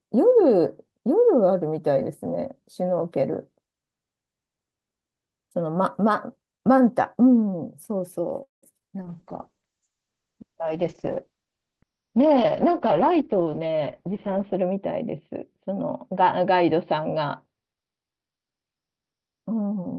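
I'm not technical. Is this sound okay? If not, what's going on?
No, it isn't. The speech has four problems, all of the kind that happen on internet calls.

From 8.43 to 8.86 s there is repeated packet loss, which gives a robotic sound. Pieces of audio failed to arrive four times in under half a second. The receiver patched each hole by stretching out the last bit it had, so about half of that stretch is filler. The longest hole lasted 191 ms.

From 9.02 s to the end there is a call bitrate drop. The connection reported less room, so the sender squeezed the speech much harder. It also cut the upper range off above 6 kHz. From there on the speech sounds duller and rougher, and it stays that way until the clip ends.

From 9.17 to 9.59 s there is a jitter buffer slow-down. The receiver's small reserve of incoming audio ran low, or the receiver had just decided to hold more of it. To build it up, the receiver repeated tiny slices of sound and added 42 ms in total. 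That stretch plays at 92% speed and is drawn out, though the pitch stays the same.

From 12.81 to 14.77 s there is a jitter buffer speed-up. Here the reserve had grown too large, so the receiver trimmed out tiny slices, about a fifth of a second in total. That stretch plays at 109% speed and sounds hurried, with the pitch unchanged.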